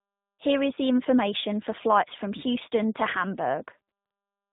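Tandem speech coding runs throughout: the speech passed through a G.726 32 kbit/s coder, then G.711 mu-law, then the G.729A 8 kbit/s coder, each re-encoding the previous coder's damage. The result is rough, muffled and warbly speech with nothing above 3.8 kHz.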